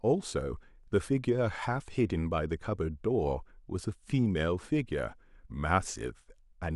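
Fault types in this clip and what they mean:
Nothing in this speech recording stood out as a fault on listening.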